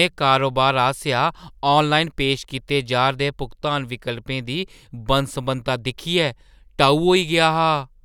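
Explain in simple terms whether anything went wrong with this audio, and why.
Nothing went wrong; the recording has no faults.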